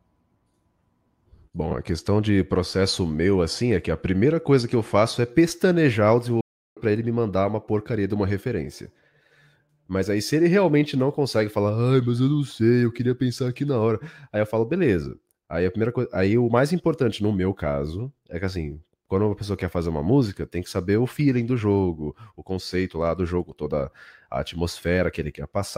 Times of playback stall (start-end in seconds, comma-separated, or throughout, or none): 6.41-6.77